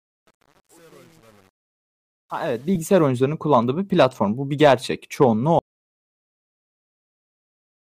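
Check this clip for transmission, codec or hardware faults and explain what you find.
Three problems turn up in this speech clip: a gritty fade-in, one brief codec glitch, and a hard cut to silence near the end.

Truncation distortion on the fade runs from the start to about 3.07 s, worst up to 2.49 s, just before "kullandığı bir platform". The volume stage keeps only about 9 bits with no dither, so the quiet early part turns steppy and grainy instead of rising cleanly.

A lost LE Audio frame shows up at 2.75 s. The gap is 7.5 ms, which fits a single LC3 frame going missing over the Bluetooth link. The decoder patches it by reusing the previous spectrum with scrambled signs, so you hear a tiny noisy smear rather than a click.

An audio dropout to silence starts at 5.59 s and lasts to the end. Everything after that point is dead digital silence with no room tone at all. That's likely the input or link dropping out while the recorder kept writing silence, so whatever came next is simply gone.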